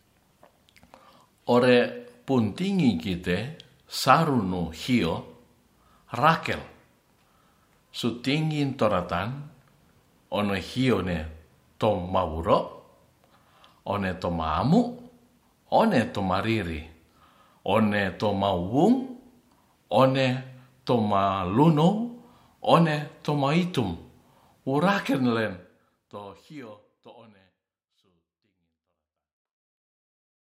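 Nothing in this speech recording goes wrong on the technical side; the level simply eases down in a gentle, deliberate fade-out from around 25 seconds to the end, with no click or hard edge.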